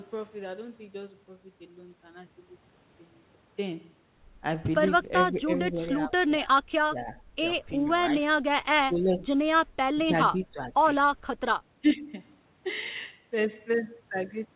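Speech over a call line band-limited at 4 kHz, which fits G.711 mu-law at 64 kbps, shows speech suppressed in double talk at 5.31–6.12, 6.44–6.48, 6.91–7.17, 7.84–7.91, 8.32–8.37, 8.83–9.47, 9.93–10.84 and 11.82–12.11 s. The level drops by about 5 to 20 dB, deepest around 9 and 10 s. On the waveform these are sudden envelope dips, and on the spectrogram they are faded vertical bands, likely from the echo canceller ducking the near talker during overlap.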